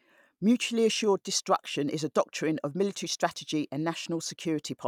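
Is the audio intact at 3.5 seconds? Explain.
Yes, the audio is intact at 3.5 seconds, with no dropout, click, distortion or other fault at that point.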